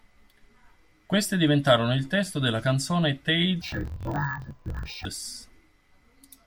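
From 3.62 s to 5.07 s, right after "il testo della canzone", the speech drops an octave and turns doubled and choppy. This is interleaved audio read as planar: each block of alternating left and right samples is split in half, with the first half taken as left and the second as right. Each channel therefore plays its content at half speed, shifting the pitch down 12 semitones. The 21.77 ms blocks restart 45.9 times a second, adding a rough periodic chop.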